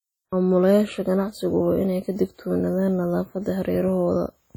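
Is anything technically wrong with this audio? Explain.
Yes. Throughout the speech, this is low-bitrate audio saved at a high bitrate. The smeared, swirly artefacts of a weak first encoding remain. That likely points to a low-bitrate WMA source re-saved as high-bitrate MP3. Unlike a plain low-bitrate file, the spectrum runs up to 19.5 kHz, yet the damage persists.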